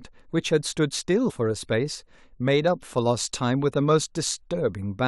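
At 1.29 to 1.31 s the speech jumps forward abruptly: compressed frames have been skipped, either missing from the stream or rejected by the decoder as damaged. Roughly 70 ms of audio simply never plays, which fits about three frames of 23.2 ms each. On a waveform the envelope shifts suddenly. A spectrogram shows harmonics and formants breaking discontinuously at the seam.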